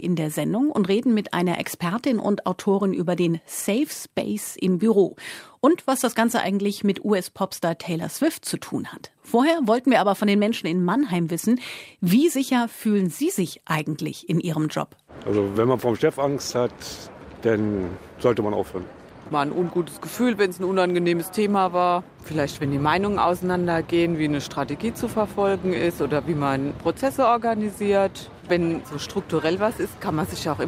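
No technical faults can be heard in the audio.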